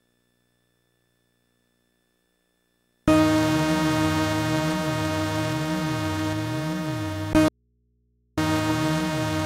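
From 7.48 to 8.38 s, an audio dropout to a faint residue, likely a lost input: the sound cuts abruptly to hum about 45 dB down, showing a near-flat waveform and only low hum lines on the spectrogram.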